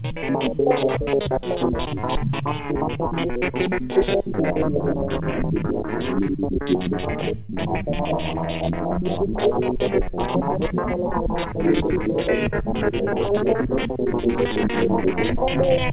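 At 7.46 to 7.52 s there is a short concealed packet loss: about 30 ms of audio never reached the decoder in time, and the receiver covered the gap with roughly 27 ms of concealment, extending the preceding sound before blending back into the real signal. The result is a brief smear or wobble in the sound, heard over a call path whose G.711 coding leaves nothing above 4 kHz.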